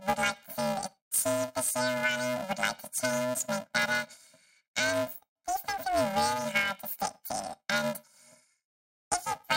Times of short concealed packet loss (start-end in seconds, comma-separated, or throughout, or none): none